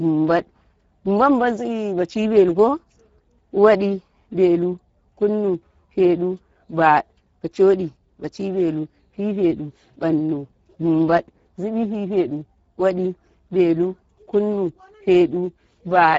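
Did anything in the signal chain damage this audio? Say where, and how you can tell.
Yes, at the codec stage: Speex encoding throughout the speech, with plainly audible damage pointing to a low bitrate of around 10 kbps. Too few bits for the excitation leave the voice hoarse and noisy, and nothing survives above 7.7 kHz.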